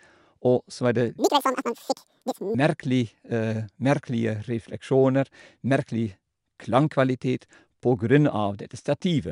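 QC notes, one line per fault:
1.19–2.55 s, wrong sample rate: the speech jumps to double speed and a full octave higher, chipmunk-style, because the samples are clocked out twice as fast as they went in, which fits audio made at about 22 kHz being played at 44.1 kHz.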